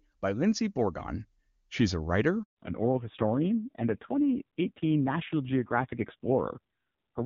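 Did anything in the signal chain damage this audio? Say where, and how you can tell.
Yes. After "a writer" the speech cuts out from 2.43 to 2.57 s. This 140 ms handover gap at the network stage means frames were lost during a link switch.

From 2.57 s onward the speech turns dull and rough with nothing above 4 kHz. This is a codec fallback to narrowband from HD Voice AMR-WB.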